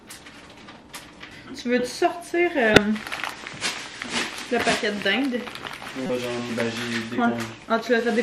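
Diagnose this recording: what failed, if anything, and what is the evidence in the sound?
Corrupt frame decoded at 2.74–2.77 s and 6.06–6.10 s: short glitches, the first near full scale, as the codec played bit-damaged frames with misread gains.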